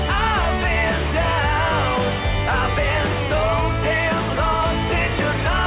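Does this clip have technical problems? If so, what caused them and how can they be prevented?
No, nothing stood out as a technical problem on listening to this clip, so there is nothing here that needs preventing.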